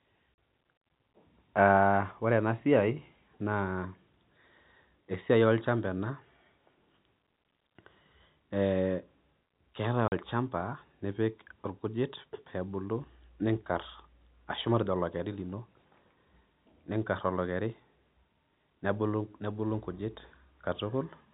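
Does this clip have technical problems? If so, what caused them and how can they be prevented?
Yes. The speech has two dropouts from packet loss filled with silence, at 0.36 s and from 10.08 to 10.12 s. Each time about 40 ms of audio, which fits two 20 ms packets, is missing from the G.711 telephone stream, and the receiver plays digital silence in its place. The abrupt cut to silence and the return to signal leave hard edges. Enabling packet loss concealment at the receiver and using a jitter buffer with forward error correction would prevent this.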